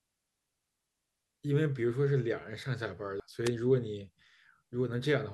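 Compressed frames skipped at 3.20 s: about three frames of the encoded audio never reached the output, either missing or rejected by the decoder as damaged, so the speech jumps ahead by roughly 300 ms, with frames of about 85 ms.

A wireless microphone noise hit follows from 3.45 to 3.49 s: the FM radio link faded as reflected signals cancelled, letting receiver noise rise over the speech. It comes through as a brief swish of static lasting under 50 ms.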